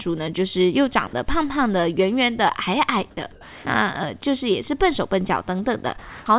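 Around 1.07 to 1.13 s there's a sound dropped by the voice detector: a brief 60 ms stretch where the speech gives way to steady, flat noise, with about 40 ms of actual sound lost. The likely cause is the sender's detector mistaking a quiet bit for background and briefly stopping transmission.

At 3.15 s you get an onset clipped by the voice detector. The speech comes in abruptly, missing its soft start, because roughly 20 ms of the beginning was replaced by filler noise, which points to the detector being slow to notice the sound resuming.

Then from 3.32 to 3.65 s there's comfort noise in place of the background. The real room sound, sitting about 22 dB below the loud parts, is swapped for a smooth, featureless hiss roughly 2 dB quieter. That's likely discontinuous transmission filling the pause with synthetic noise.

From 4.67 s to the end, one channel runs about a single sample late against the other, and summing them to mono gives channel delay (comb filtering). 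With a delay that tiny the first notch sits up near 20 kHz, so what you hear is a slight loss of openness rather than obvious hollowness, especially since the call path already removes everything above 4 kHz.

Inside that stretch, from 5.99 to 6.26 s, the background is again replaced by comfort noise. The real background, about 20 dB under the loudest parts, gives way to even, detail-free noise around 2 dB quieter, likely the same discontinuous transmission filling the gap.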